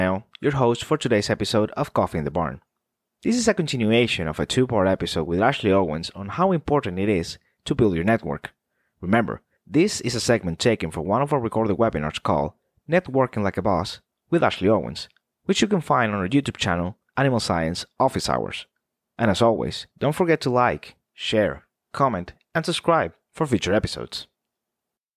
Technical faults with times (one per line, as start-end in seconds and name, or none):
none